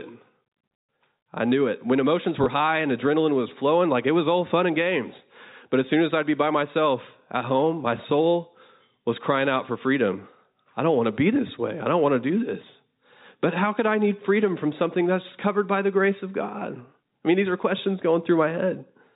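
At about 2.44 s, right before "high and adrenaline was", there's a quick bit of packet loss with the last packet repeated. Roughly 20 ms of audio went missing, which fits a single lost packet, and the receiver filled the gap by replaying the previous one. The replay comes through as a small blip. The 4 kHz telephone-band sound of the G.711 coding is still there underneath.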